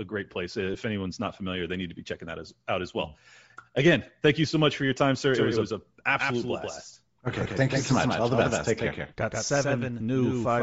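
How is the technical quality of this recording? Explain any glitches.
The recording has clear technical problems: codec damage throughout, two brief dropouts, and a delayed duplicate of the sound over its second half.

Bluetooth LC3 compression, likely the cause of the coarse sound throughout, gives the speech a breathy, grainy edge. At a low bitrate, plausibly around 32 kbps, the encoder discards much of the upper spectrum and fills those bands with noise. On a spectrogram the high frequencies look blotchy and noise-textured rather than finely detailed, with block structure consistent with 7.5 ms frames.

Lost LE Audio frames cause two short glitches, at 0.74 s and 7.44 s. The first lasts 7.5 ms, which fits a single lost frame. The second lasts 15 ms, which fits two. In each case the decoder repeated the previous spectrum with randomised signs, so the sound briefly turns into a noisy smear. 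A spectrogram shows a thin vertical smudge where harmonic lines dissolve into noise. The waveform shows a short patch of irregular fill.

A doubled audio track begins abruptly at 5.34 s and runs to the end. A second full-band copy follows around 150 ms behind and is about 5 dB quieter. The most likely cause is the signal being captured twice, once through a slower path. It sounds like a dry slapback echo with no room decay. The waveform shows a repeated, offset envelope, and the spectrogram shows every syllable's pattern ghosted slightly later.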